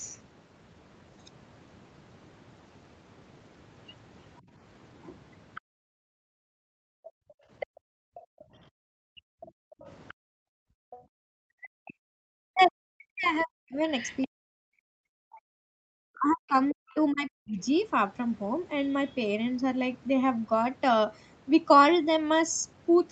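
A speech recording from a call, with two faults. The background is gated by the echo canceller: the room sound dips by about 20 dB at 4.41–4.52 s, then by as much as about 40 dB for roughly four seconds between 5.61 and 10.91 s. Unlike a network dropout, only the background ducks. The other side's voice is leaking through, likely residual echo the canceller missed. It is a faint second voice, well below the talker, at 5.55–5.61, 7.30–8.44, 9.46–10.99, 13.41–14.26 and 16.33–17.00 s, distinct from room reverb of the talker's own voice.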